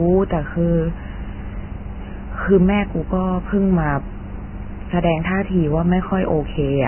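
From start to finish the speech is dull and grainy, with nothing above about 3.1 kHz and a hissy, roughened texture in what remains. That's likely heavy Vorbis compression, its treble quantised into noise, which fits a very low bitrate around 10 kbps.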